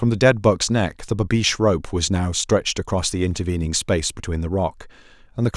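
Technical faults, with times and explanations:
No technical faults can be heard anywhere in this speech recording. There is nothing here that needs a time or an explanation.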